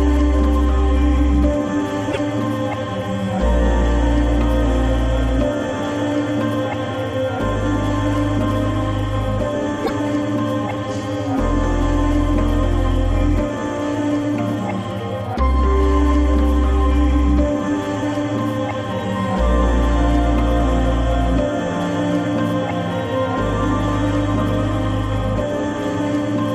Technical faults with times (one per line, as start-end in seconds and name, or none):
2.10-2.17 broken MP3 bit reservoir
9.84-9.91 broken MP3 bit reservoir